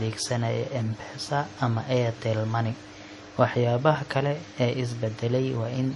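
Throughout the speech there is plainly audible MP3 compression, with nothing above 11.4 kHz and watery, swirling artefacts, likely from a low bitrate around 48 kbps.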